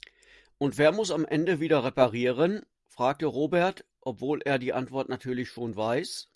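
No technical faults can be heard anywhere in this speech recording, and the signal stays intact throughout.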